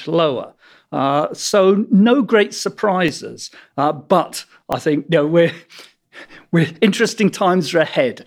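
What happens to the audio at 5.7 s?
Nothing goes wrong at 5.7 s; the speech carries on intact through that moment, with no dropout, click or other fault.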